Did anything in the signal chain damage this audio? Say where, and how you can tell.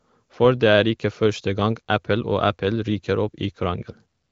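No, nothing in the chain audibly damages this speech.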